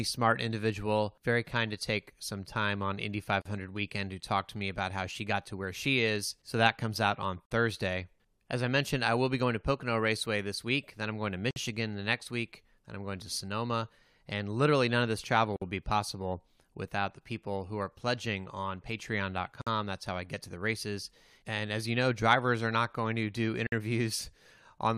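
Gaps at joins of encoded pieces interrupt this speech clip at 3.42, 7.46, 11.51, 15.56, 19.62 and 23.67 s, one every 4 s. Each is a short soft-edged silence, about 40 ms at the first (just before "weekend to talk to") and 53 ms at the rest, including between "then I'm going to" and "the next week then" and between "none of this travel" and "be possible without the". The audio was encoded in 4-second pieces and joined untrimmed, so each piece's start-up delay and final-frame padding remain as silence before the sound resumes.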